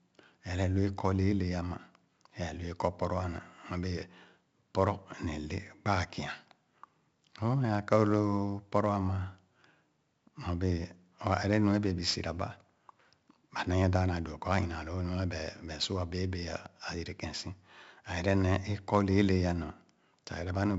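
Speech, and the whole way through it carries the signature of 4-bit ADPCM compression: a gritty hiss that rides up and down with the level, loudest on the strongest syllables, plus a crunchy smear on sharp onsets where the adaptive step can't keep up. The damage is heavy. Nothing comes through above about 7.7 kHz, so it sounds dull too, which fits a 16 kHz sample rate and a 64 kbps stream.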